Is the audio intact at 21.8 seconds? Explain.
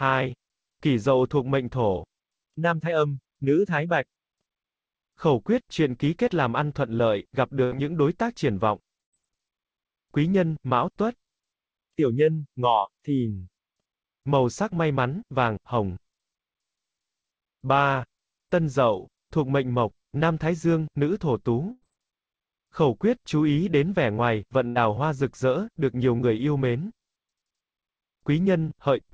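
No, a burst of packet loss hits from 21.71 to 21.84 s: about 100 ms went missing, concealed by stretching and fading the preceding sound before playback resumes further on.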